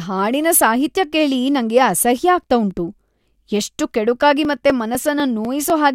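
After "ಹಾಡಿನ ಸಾಹಿತ್ಯ ಕೇಳಿ ನಂಗೆ", from 1.96 to 5.70 s, periodic USB or driver dropouts skip roughly a millisecond every 0.25 s, producing metronome-regular ticks, unlike randomly spaced clicks.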